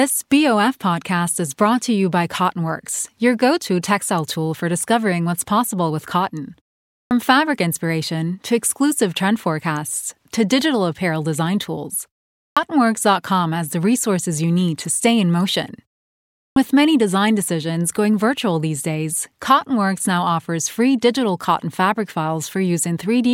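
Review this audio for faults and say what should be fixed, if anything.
Clipped start after a pause at 7.0, 12.44 and 16.45 s: the output sleeps during brief silences and swallows about 0.11 to 0.13 s of speech onset while waking. Keep the output device awake through pauses.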